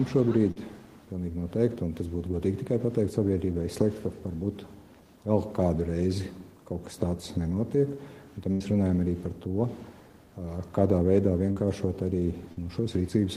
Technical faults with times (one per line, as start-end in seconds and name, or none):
0.51-0.59 short concealed packet loss
8.52-8.63 burst of packet loss
11.52-11.59 short concealed packet loss
12.52-12.59 short concealed packet loss